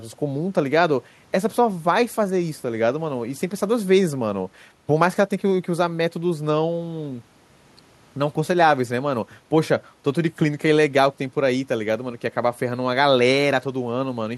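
Speech recording, no technical faults detected.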